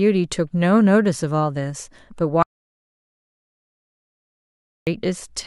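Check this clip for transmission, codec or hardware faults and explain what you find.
One fault is present: an audio dropout to silence from 2.43 s to 4.87 s. The speech cuts off abruptly, leaving about 2.44 s of total silence with no room tone, then resumes mid-flow. The likely cause is lost input, such as a disconnect or mute, while recording continued. On a waveform this shows as a flat line, and on a spectrogram as a blank, empty band across all frequencies.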